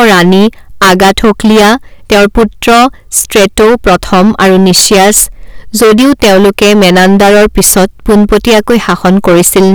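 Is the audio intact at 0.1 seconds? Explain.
No. Hard clipping runs through the whole clip, including 0.1 s: the speech is overdriven by about 21 dB, so roughly a third of samples hit the ceiling and are cut flat. Those squared-off peaks add high harmonics, heard as harsh fuzz on every loud sound.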